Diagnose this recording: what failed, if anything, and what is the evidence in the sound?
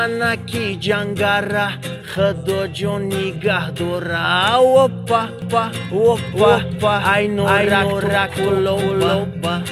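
From 5.42 s onward, an equally loud, dry copy trails about 400 ms behind: a doubled audio track, likely from a slower second capture path.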